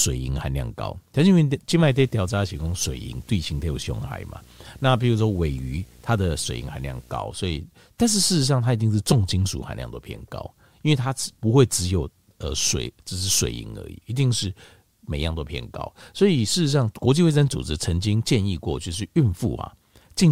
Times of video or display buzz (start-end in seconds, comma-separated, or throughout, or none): 1.86-7.17